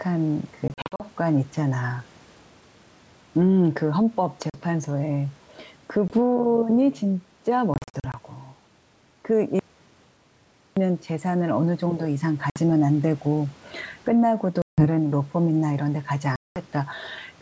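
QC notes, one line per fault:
Throughout: gain pumping. Loud and soft parts end up closer in level, a swing of roughly 10 dB, likely from high gain hitting a fast limiter.
0.68–1.04 s, 4.50–4.61 s, 6.08–6.12 s, 7.74–8.15 s, 12.50–12.59 s, 14.62–14.88 s, 16.36–16.61 s: packet loss on an ADPCM call. Hard-edged holes of 20 to 200 ms, some scattered as short bursts up to 40 ms. Speech returns slightly distorted as the decoder's predictor resynchronises.
9.59–10.77 s: audio dropout to silence. Sound cuts to silence for about 1.17 s, with no room tone at all, likely from the input being lost while writing continued.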